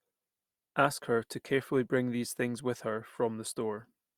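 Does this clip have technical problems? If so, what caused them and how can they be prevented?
No technical faults are audible.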